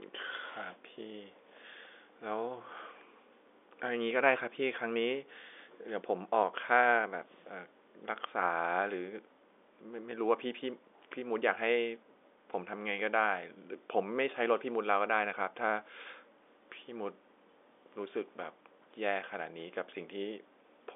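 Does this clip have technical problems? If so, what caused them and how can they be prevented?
No, no technical faults heard.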